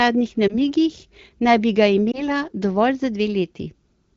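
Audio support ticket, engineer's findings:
Lost AMR speech frames, 0.48–0.55 s and 2.12–2.23 s: corrupted frames concealed by repeating last pitch/vocal-tract settings at falling gain; brief dip or warble each, fitting one 20 ms frame.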